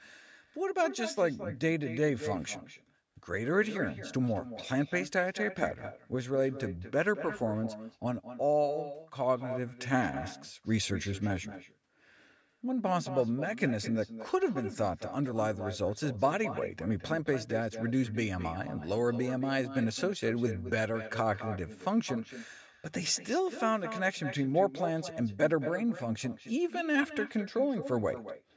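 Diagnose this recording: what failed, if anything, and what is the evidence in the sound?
Every phrase of the speech is trailed, across the whole recording, by a quieter and thinner copy arriving roughly a fifth of a second later, about 11 dB below the direct sound. This is echo with no canceller, a failure at the call-processing stage. The far end's loudspeaker output is picked up by its own microphone and returned over the network, and no echo canceller removes it. The band-limited sound, with nothing above 8 kHz, comes from normal call microphone processing.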